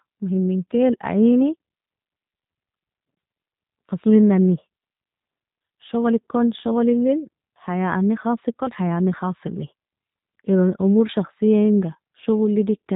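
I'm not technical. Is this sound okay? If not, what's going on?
No. The speech has the sound of the G.729 codec from start to finish. This phone-call format rebuilds the voice from a simple model, so it sounds slightly rough and synthetic. Nothing above 4 kHz gets through, which makes the speech dull and boxy.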